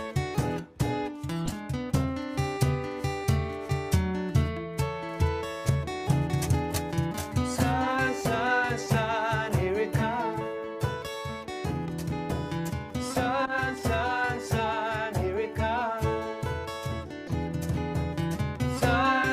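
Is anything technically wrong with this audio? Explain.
Yes. Corrupt frames were decoded at 0.40 s, 1.46–1.50 s, 13.45–13.52 s and 17.27–17.31 s. Flipped bits in the compressed data produced wrong gains and misread codes across one to a few frames, giving short chirps and noise bursts peaking around −30 to −20 dBFS.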